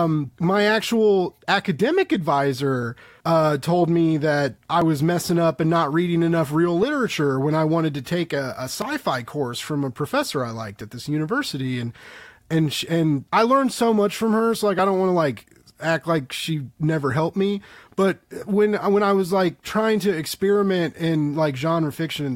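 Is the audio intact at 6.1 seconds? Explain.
Yes, at 6.1 seconds the speech plays through intact, with no dropout, click or other fault at that moment.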